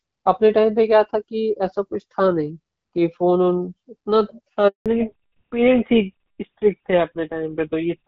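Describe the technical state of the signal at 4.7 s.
At 4.7 s you're right inside a handover gap, from 4.68 to 4.86 s: the call switched networks, no speech frames came through, so the voice drops out for about 180 ms.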